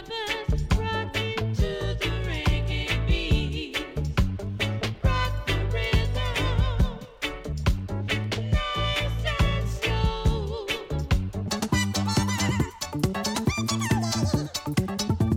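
Section at the wrong speed, 11.48 s to the end: the audio plays twice as fast and roughly ten semitones higher, likely a clock mismatch.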